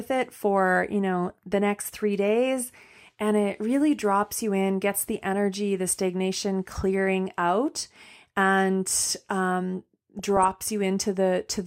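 A speech clip with DAB burbling in two places. At 1.29 s, between "it for you know" and "the next three days", there are a few brief watery blips. From 10.19 to 10.55 s, after "clearing out and um", a longer patch of chirps and gurgles follows. Weak reception let bit errors slip past error correction into the MP2 data. Wrong samples put short blips of noise into single sub-bands. The second burst sounds denser, which points to more frames hit and a higher error rate, around 0.3 percent.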